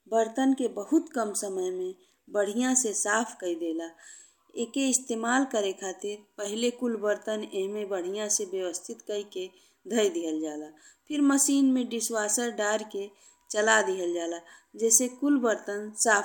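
Nothing in this speech recording trips up at any point, so there's really nothing here to flag.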